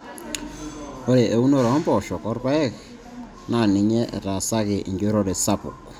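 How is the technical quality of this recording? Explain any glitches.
No audible glitches or faults.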